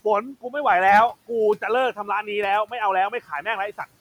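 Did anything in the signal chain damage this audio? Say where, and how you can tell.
Yes: call processing. Speech cut by the noise suppressor at 1.96–2.27 s and 3.1–3.46 s, dipping about 11 dB along with the room noise, never to silence as a dropout would.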